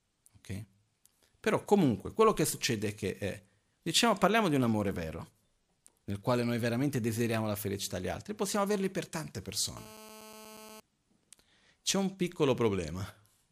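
Speech with a GSM phone buzz from 9.77 to 10.80 s, right after "possiamo averli per tante". It is a hard, raspy 217 Hz tone with many harmonics, about 20 dB below the speech. It holds steady, as during a call. The audio circuit is rectifying a nearby 2G phone's transmit bursts.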